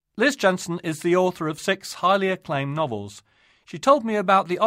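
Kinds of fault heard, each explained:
Nothing wrong turns up in this bit of speech; there's no fault to point to anywhere in it.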